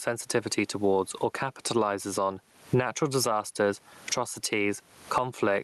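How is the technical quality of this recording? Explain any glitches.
The recording has one clear fault, gain pumping, running through the whole clip. Throughout, the gain swings by around 20 dB. The likely cause is input gain set far too high, with a fast limiter or compressor clamping down on each peak and releasing in the gaps, which squashes the dynamics. The room's background noise, about 43 dB below the speech, is part of the recording itself. The top end stops near 12 kHz, which fits a call codec such as Opus.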